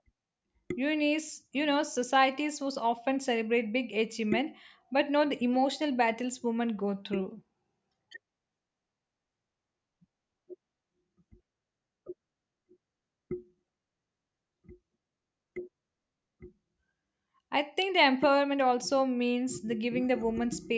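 No technical faults are audible.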